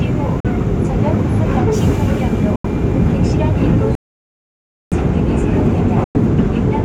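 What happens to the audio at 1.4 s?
Nothing goes wrong at 1.4 s; the sound continues intact through that moment with no dropout, click, glitch or other fault.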